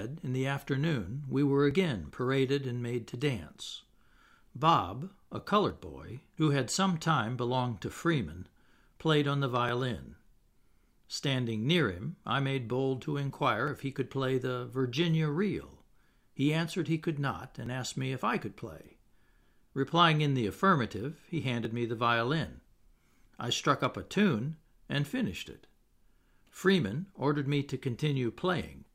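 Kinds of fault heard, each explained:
Audio missing between chunks: at 1.71, 5.70, 9.69, 13.68, 17.66 and 21.65 s the speech jumps ahead by roughly 10 ms, once every 4 seconds, likely because the audio is handled in 4-second blocks and a sliver is lost at each handover.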